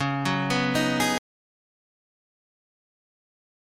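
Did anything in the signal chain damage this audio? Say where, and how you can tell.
Yes: an audio dropout to silence at 1.18 s runs to the end, silence without room tone, likely from a lost input device or link.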